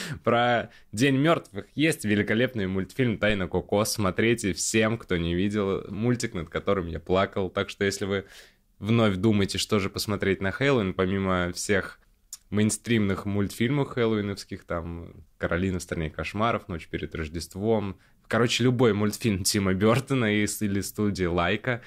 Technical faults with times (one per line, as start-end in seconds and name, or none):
3.30-3.44 phantom power thump